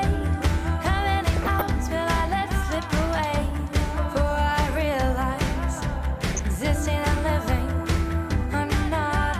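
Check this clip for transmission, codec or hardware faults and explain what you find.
Two short bursts of DAB burbling are audible, one from 1.36 to 1.62 s and a briefer one from 6.27 to 6.39 s. Weak reception lets bit errors slip past the error correction into the MP2 data, so corrupted samples put short blips of noise in single sub-bands and corrupted scale factors make sub-bands jump in level for up to a frame. Both bursts are heard as noise in single sub-bands over the programme, consistent with a bit error rate of roughly 0.2%. Unlike a packet dropout, burbling does not silence the sound. Unlike steady low-bitrate warble, the damage is brief and confined to isolated bands.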